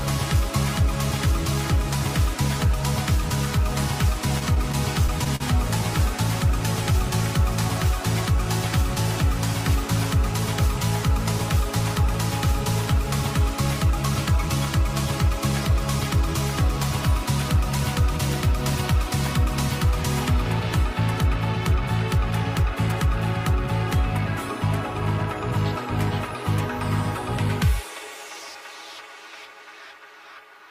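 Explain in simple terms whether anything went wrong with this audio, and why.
Yes, between 4.39 and 5.42 s the audio hits repeated stalls (stutter): it halts six times, each pause up to 44 ms, filled by stretching the last sound. Unlike dropouts, nothing goes missing; the sound just drags and catches because data arrived late.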